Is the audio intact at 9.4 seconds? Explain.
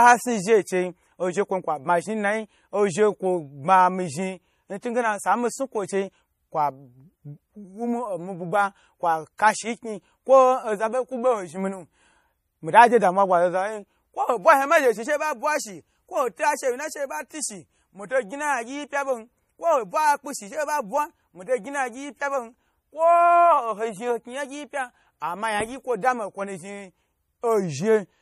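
No. Right after "bugba kwa", at 9.38 s, there's a brief pre-echo: codec noise spread across the transform block smears into the quiet before an attack, giving a short hiss. The whole clip also has plainly audible, watery MP3 compression damage, likely from a low bitrate around 40 kbps, with nothing above 15 kHz.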